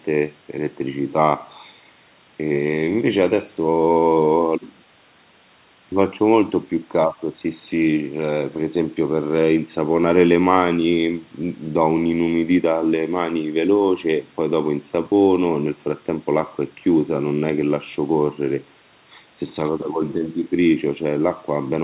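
No faults can be heard anywhere in this speech.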